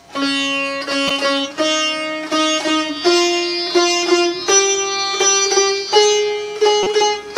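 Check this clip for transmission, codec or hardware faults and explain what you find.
Two short corrupt frames decoded, at 1.08–1.11 s and 6.83–6.87 s. Damaged bits, played anyway, misplace energy across one frame, then a couple, giving chirps, squeaks or noise bursts peaking around -5 dBFS, seen as brief smears on the spectrogram.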